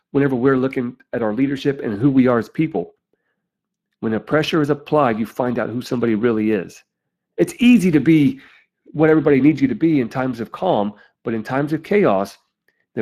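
From start to finish the speech carries Speex codec damage, and it's plainly audible. Speex is a CELP coder from older VoIP and game chat. The grain here points to a setting around 22 kbps, where the encoder has too few bits to rebuild the excitation underneath the vocal-tract model. So the voicing never quite sits clean. It comes across hoarse and noisy, with a rough, breathy edge riding on every stretch of speech.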